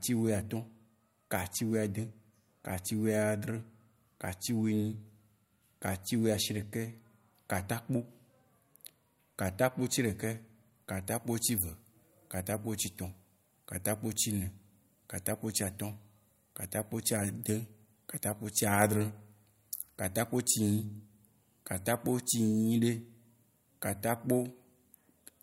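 From the start to 11.05 s, de-emphasis has been applied wrongly: a treble cut meant to reverse pre-emphasis acts on speech that either never had any boost or had already been de-emphasised once. The response slopes down gently, about 8 dB lower at 10 kHz than at 1 kHz, leaving the speech dull and muffled.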